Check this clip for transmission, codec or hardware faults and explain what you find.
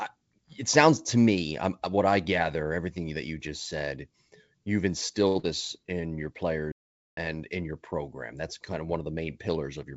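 Three faults are audible in this speech clip, two close together around 5.3 s and a longer break near 6.7 s. The audio comes through a wideband call path with nothing above 8 kHz, which fits G.722 at 64 kbps.

Short stall from a late packet, 5.28 to 5.37 s. A packet had not arrived when it was due, so the jitter buffer drained and the receiver kept extending the last sound for about 73 ms until the data turned up. It then resumed from exactly where it stopped, so nothing is lost. What you hear is one sound held unnaturally long, with a faint buzzy or slightly dipped quality before normal flow returns.

Short concealed packet loss, 5.39 to 5.45 s. Right after the stall, about 60 ms of audio never reached the decoder in time. The receiver covered the gap with roughly 39 ms of synthesised continuation, carrying on the previous sound's pitch or its noise shape, and then crossfaded back into real audio while trimming roughly 20 ms of the delay it had just built up. 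It comes across as a brief smear or wobble, and a short consonant in that spot may be missing.

Playback stall, 6.72 to 7.17 s. The output goes silent for about 0.45 s in mid-flow, then picks up again. That length of dead air points to the player running short of data or its audio thread being blocked. The effect is an abrupt gap that cuts the speech off and then restarts it.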